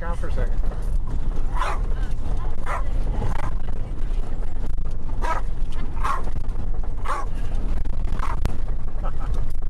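At 1.12, 5.53 and 8.46 s, damaged data in the compressed stream makes the decoder lose sync for about 0.05 s, giving short glitches that appear as abrupt vertical smears and waveform breaks.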